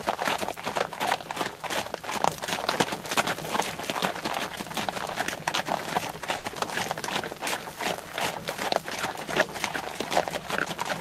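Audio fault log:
6.37–6.46 s, short stall from a late packet: a packet arrived after its playout time, the jitter buffer emptied, and the receiver held the last sound for about 70 ms before resuming where it left off. Nothing is lost, but the sound hangs briefly with a faint buzzy dip, and everything after runs 70 ms later.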